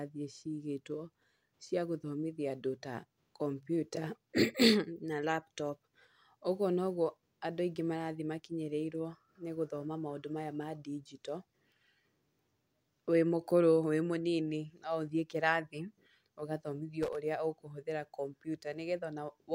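Right near the end, from about 17.03 to 17.18 s, there's a quick burst of loose connector crackle just before "ũrĩa ũkũhũthĩra". A worn or dirty contact is flickering open and shut, chopping the speech into a scratchy, irregular rattle for roughly 0.15 s.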